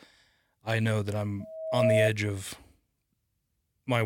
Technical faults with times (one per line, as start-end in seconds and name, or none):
1.40-2.11 loudspeaker feedback squeal